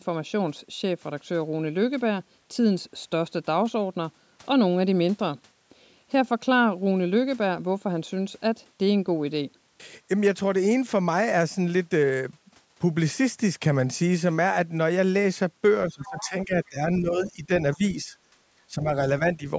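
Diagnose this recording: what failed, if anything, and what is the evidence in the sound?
Speech suppressed in double talk, at the call-processing stage. The talker's level sinks from 15.89 to 17.5 s, by roughly 15 dB at worst. Shorter dips of about 10 dB follow at 17.76 to 18.13, 18.69 to 18.91 and 19.37 to 19.46 s. The likely cause is an echo canceller that turned down both voices while both sides talked.

The other side's voice is leaking through, also in call processing. A faint second voice sits about 20 dB under the speech from 16.02 to 16.29 s. It returns at about 30 dB down from 17.24 to 17.32 s. Likely the echo canceller left some loudspeaker sound in the microphone.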